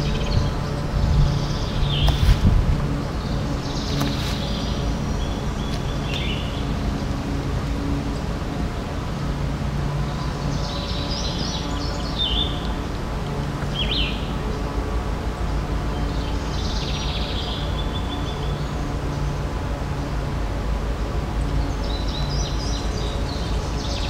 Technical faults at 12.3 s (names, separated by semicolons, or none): none